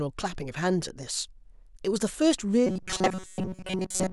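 From 2.67 s to the end, audio likely arrived too slowly and most of it was filled by repeating a buffer of about 5.3 ms, giving robotic sound from repeated short buffers: a rigid, metallic 188 Hz buzz.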